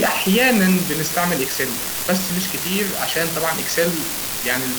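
From start to finish, the speech carries an unreliable data bit. One bit line in the converter or interface is marginal and randomly flips in some samples, so each error adds a jump of the same size, about -12 dBFS. The result is a continuous crackling fizz that keeps going through the pauses. The waveform shows identical-height spikes scattered throughout, even in silent stretches. The spectrogram shows a broadband speckled haze of thin vertical lines over the whole clip.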